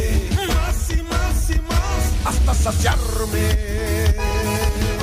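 No faults detected anywhere in the recording.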